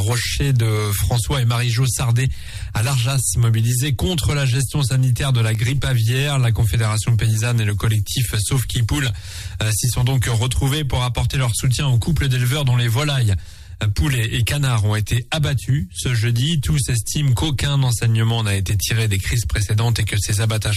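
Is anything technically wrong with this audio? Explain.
Yes, there's a DC step at 7.19 s. The waveform's zero line jumps suddenly by about -28 dBFS, then drains away as a 20 Hz high-pass filter bleeds it off. You hear a single low thump or click there while the sound carries on unchanged.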